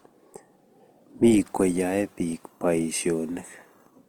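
A short speech clip carrying plainly audible Opus compression throughout: grainy, rough, noise-filled texture with full bandwidth, likely a low-rate CELT-mode encode around 24 kbps.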